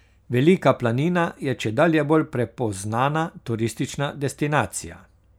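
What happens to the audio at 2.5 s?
Nothing goes wrong at 2.5 s; the speech runs through that moment intact, with no dropout, click or glitch.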